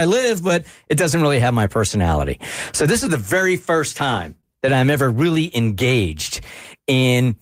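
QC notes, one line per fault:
4.41–4.46 s, short stall from a late packet: the jitter buffer ran empty, so the last speech sound was held 26 ms, then resumed with nothing lost.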